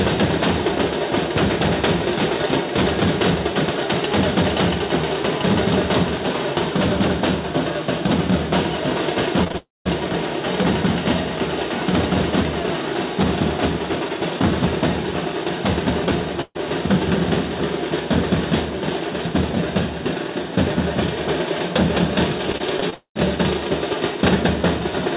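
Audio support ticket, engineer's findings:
Short concealed packet loss at 9.44, 9.48 and 9.52 s: three quick smears, about 20 ms each missing. The jitter buffer patched each hole by extending the last sound, then crossfaded back.

Long network dropout, likely cause, 9.57–9.87 s and again 22.94–23.17 s: the fill buzz/hiss fades into near-silence, and roughly 0.28 s and 0.22 s of audio are simply gone when playback resumes.

Burst of packet loss at 16.41–16.59 s: about 140 ms missing. You hear a held, decaying buzz/hiss from concealment, with a short silent tail before the real audio picks up further on.

Repeated packet loss (robotic sound) at 22.52–22.94 s: choppy stretch with 4 small gaps, the longest 23 ms, about a fifth of the span concealed. It runs straight into the second dropout.

Codec band-limit: nothing above 4 kHz, which fits the G.711 mu-law call path at 64 kbps.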